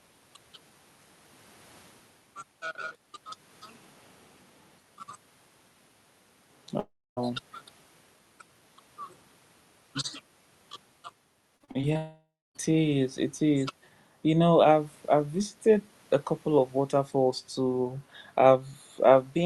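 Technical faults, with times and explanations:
6.79–7.19 s, long network dropout: the speech continues briefly as a fading buzz, then drops to near silence; likely a network dropout, and about 0.38 s of audio never returns.
11.57–11.97 s, repeated packet loss (robotic sound): five short gaps, the longest 36 ms, are patched by extending the previous sound, giving choppy speech with about a third concealed.
11.97–12.57 s, long network dropout: immediately after, the sound smears into a decaying buzz and then near silence; likely a dropout, with roughly 0.58 s lost before speech resumes.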